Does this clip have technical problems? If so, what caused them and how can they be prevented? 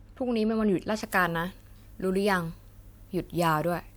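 Yes. Pre-emphasis left on from 1.02 s to the end at 3.97 s: the treble boost applied for transmission was never undone, so the top end sits about 10 dB high at 10 kHz relative to 1 kHz, a tilt that fits the 50 µs FM curve, making the speech thin, bright and sibilant. To prevent it, apply the matching de-emphasis on playback or capture and check that the emphasis setting agrees at both ends of the chain.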